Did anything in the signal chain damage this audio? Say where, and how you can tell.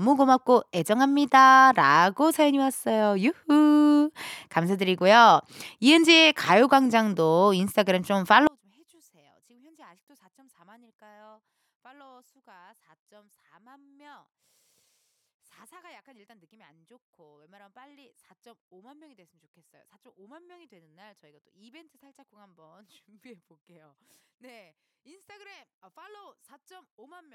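Yes. From 8.47 s to the end, the speech collapses by about 35 dB into a faint residue, likely one channel inverted in the analogue wiring. The waveform shrinks abruptly there, and the spectrogram goes nearly dark.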